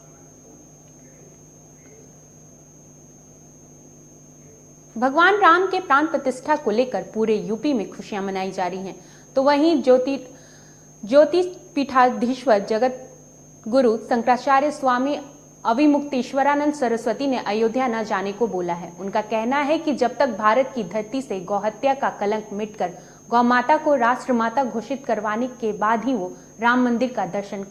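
A skip ahead occurs between 1.73 and 1.75 s. Roughly a second of audio never reaches playback, either lost in transit or discarded when the jitter buffer overflowed while later audio was already queued. Playback jumps straight from the material before the cut to the material after it, with no filler inserted. The two sides are joined almost directly, so the sound lurches forward abruptly rather than pausing.

A jitter buffer speed-up follows from 1.83 to 2.80 s. Just after the jump, the receiver was still holding more audio than its target. To trim that excess delay, it repeatedly removed short slices of one or a few pitch periods, taking out roughly a tenth of a second in total. The sound runs at 112% of normal speed with its pitch unchanged, giving this stretch a hurried, pressed feel until it settles back to normal pace.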